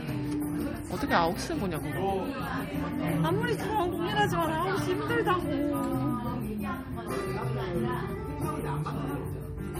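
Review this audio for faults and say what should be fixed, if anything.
Throughout the clip, the sound has a plainly audible watery, swirling texture. Nothing comes through above 18 kHz. This is likely MP3 compression, at a bitrate that fits about 48 kbps. Short of bits, the encoder cuts the treble and switches weak frequency lines on and off between frames. Re-export from the original source at a much higher bitrate, or in a lossless format.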